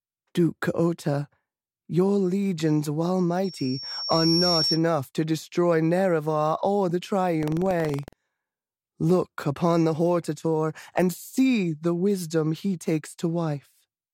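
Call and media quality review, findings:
Loudspeaker feedback squeal, 3.44–4.82 s, after "legions while", clearing before "to destroy". Single 5.5 kHz tone swelling over roughly a second to about speech level. Mic re-captures its own speaker output; loop gain above unity at 5.5 kHz.

Buffer tearing, 7.38–8.21 s, after "or the". Robotic 21.5 Hz buzz on the speech, which fits a 2048-sample buffer. Writer and reader crossing each period; a small slice per buffer replays audio about 100 ms old, hard-joined.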